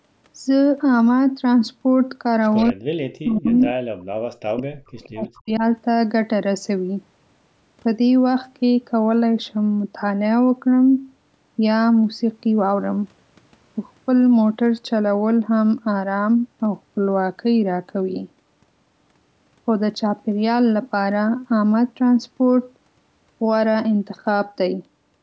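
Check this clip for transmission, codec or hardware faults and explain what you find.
Three related faults from a loudspeaker call's echo handling appear in this speech, all within the first six seconds.

Echo leak occurs at 2.56–2.73 s, 3.46–3.73 s and briefly around 5.04–5.09 s. The likely cause is an echo canceller that failed to remove everything its microphone picked up from the loudspeaker, so the residue was sent back. You hear a copy of the voice trailing by 172 ms. It is about 20 dB below the speech in the first burst, stronger at about 10 dB down in the second, and weakest at about 35 dB down in the third.

Speech suppressed in double talk runs from 2.71 to 3.68 s and from 4.42 to 5.64 s, overlapping the echo bursts. Both ends were talking together, and the canceller, likely unable to separate the local talker from the returning echo, turned everything down. The voice dips sharply, by up to roughly 40 dB, for about 0.7 s in the first stretch and about a second in the second.

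Background gated by the echo canceller hits at 3.94–4.14 s. While the far-end audio was playing, the canceller clamped the microphone hard, pulling the room sound down by about 40 dB for roughly 0.2 s. The ambience abruptly drops to near silence and then snaps back once the canceller releases.

The call's microphone processing is also audible in the band limit, with nothing above 8 kHz.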